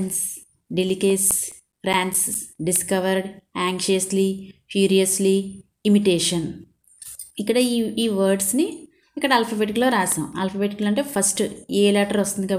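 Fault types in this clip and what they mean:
CD scratch ticks: 0.89–2.76 s and 9.91–11.57 s. A scratch defeats error correction on each disc turn, giving about five ticks a second, up to roughly 10 ms.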